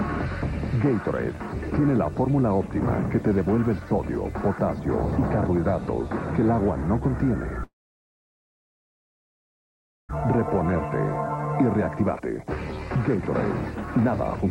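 From 7.63 to 10.15 s the sound breaks off. The last moment is carried on briefly as a fading buzz, then about 2.4 s of near silence follows. When the audio resumes, roughly 1.6 s of material has simply been skipped. That points to a long network dropout, likely caused by packets that never arrived, with the link's delay shifting by around a second. Unlike short packet-loss concealment, the fill gives up quickly and the missing stretch never returns.

Shortly after, from 11.61 to 12.47 s, the sound runs at about 118% speed, and again from 13.97 to 14.48 s at about 120%. This is a jitter buffer speed-up. The receiver held more audio than it wanted, so it repeatedly cut out tiny pitch-period slices, removing about 150 ms and then about a tenth of a second. The result sounds hurried. Because whole periods are removed rather than the signal being resampled, the pitch stays the same and does not rise.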